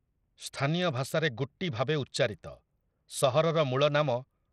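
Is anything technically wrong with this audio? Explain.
Yes. Throughout the speech, the treble flickers and drops away under a gritty, aliased haze, likely Bluetooth SBC compression starved of bits, consistent with roughly 80 kbps, coarsely quantising sub-bands.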